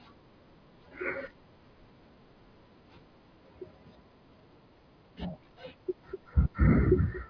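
Speech, with no technical faults audible anywhere in the recording.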